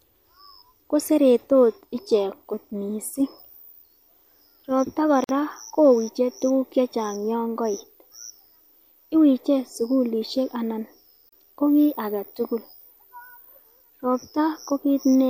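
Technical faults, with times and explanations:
5.24–5.29 s and 11.29–11.33 s, gap at a join of encoded pieces: untrimmed encoder delay and padding at 6 s joins leave 49 and 34 ms gaps, seen as flat waveform and blank spectrogram stripes with smeared edges.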